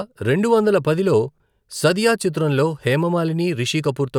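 At 1.32 s the speech briefly jumbles for about 80 ms, ending at 1.4 s. The fault is chunks out of order. A 20 ms chunk of audio arrived or was written three chunks late, so it plays after the three that should follow it. No audio is missing, but the shuffled sequence creates three hard joins where the waveform jumps, producing the scrambled moment.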